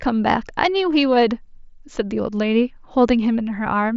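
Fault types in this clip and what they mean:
There are no fault types in this clip, so there is nothing to explain about what they mean.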